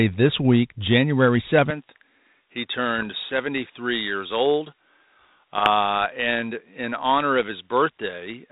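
At 1.70 s the input most likely switched to a poorer device, and the change holds to the end of the clip. The new path passes a narrower band, so the speech turns duller from that moment. There is no silence at the switch and no jump in level, and the new device's background noise sits far down, about 50 dB below the speech.

Two short bursts of bit errors on an ADPCM link follow, from 2.98 to 3.10 s and from 5.58 to 5.70 s. The errors are sparse, which fits a rate of roughly two in a thousand bits in the first and about one and a half in a thousand in the second. Each flipped bit also knocks the decoder's step size and prediction off track, so the damage rings on briefly. Both stretches are heard as pops and rough, gritty bursts with quick level wobbles, laid over the light grain of the 32 kbit/s G.726 coding.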